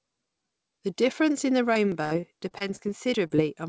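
A speech clip that goes wrong right after "difference in the". From 1.74 to 2.80 s there's repeated packet loss with that robotic sound: six separate holes, about 160 ms missing in total, the longest 66 ms. Each hole is patched by stretching the last bit of sound, and the next one arrives before the voice recovers, so roughly 15% of that stretch is patched and it comes out choppy. Inside that run, at 1.92 s, there's a small forward jump, about 10 ms gone. That's likely a dropped buffer (overrun), where the samples got overwritten before the software read them and the two sides were spliced together with no silence between. A second, bigger skip, likely of the same kind, hits at 3.14 s, about 30 ms this time. Right after that come two short concealed packet losses, 3.27 to 3.32 s and 3.36 to 3.40 s, each covering about 20 ms of missing audio. The receiver fills each gap by carrying the previous sound forward and then blends back in, which you hear as two quick smears or wobbles close together. 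The whole thing runs through a call path, with nothing above 8 kHz, which fits G.722 at 64 kbps.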